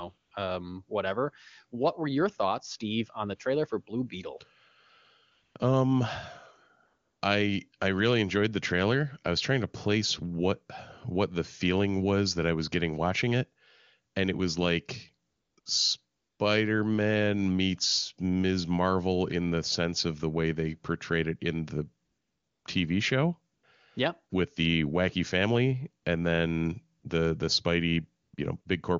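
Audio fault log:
0.17–28.65 s, AMR comfort noise: In 14 brief pauses of 20 to 600 ms, the longest at 22.05–22.65 s and one just after "and it was like", the real background drops out. Steady synthetic noise replaces it because no speech frames arrived. On a spectrogram these gaps show smooth, uniform texture with abrupt edges.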